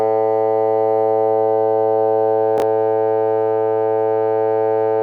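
At 2.58 to 2.62 s the sound jumbles briefly. This is chunks out of order: one 20 ms chunk arrived late and played one chunk after the piece that should follow it, leaving three hard joins.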